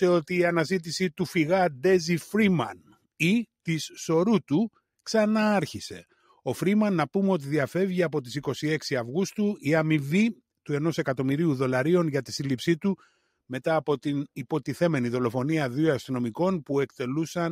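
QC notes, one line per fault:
2.74–3.06 s, sound cut by the noise suppressor: the suppressor treated this stretch as noise and pulled it down by about 12 dB.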